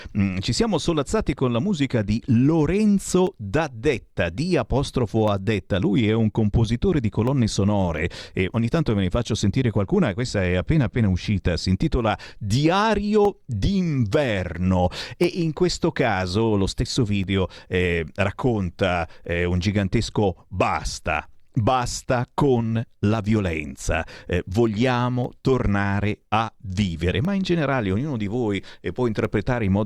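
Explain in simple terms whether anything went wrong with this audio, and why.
Yes. Periodic USB or driver dropouts: every 2 seconds, from 1.26 s to 29.25 s, roughly a millisecond of the speech is replaced by silence, causing regular ticks.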